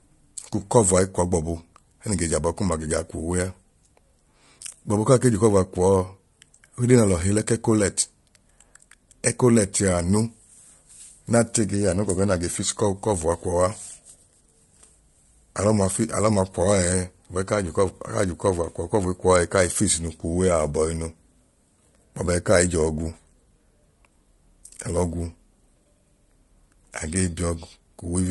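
Low-delay AAC compression runs throughout the speech, from start to finish. The voice sounds rough and grainy, with a noisy fill between the pitch harmonics and a thin, artificial-sounding top band. The likely cause is AAC-ELD, the low-delay codec used on video calls, at a rate that fits about 32 kbps. Its very short frames cannot separate closely spaced harmonics well, so the coder spends bits inefficiently and the damage is plainly audible.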